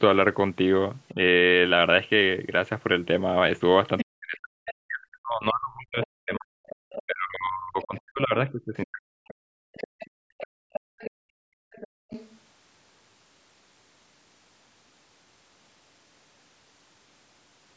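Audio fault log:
1.14–1.19 s, 4.03–10.58 s: speech suppressed in double talk. The speech dips while both sides overlap, briefly about 10 dB, then repeatedly across about 4 s with drops near 40 dB. This is likely the echo canceller muting its own talker. Unlike gating, the voice itself fades.
3.98–4.74 s, 6.03–12.36 s: other side's voice leaking through. A second voice sits under the speech, about 10 dB down at first and about 15 dB down later. It is likely loudspeaker echo the canceller failed to remove. It is an added voice, not a loss.
9.47–9.58 s, 10.86–12.10 s: background gated by the echo canceller. The room sound drops out, about 40 dB for a moment and then about 35 dB over roughly 1 s, because the canceller clamped the microphone during playback. Here the ambience vanishes, not the talker.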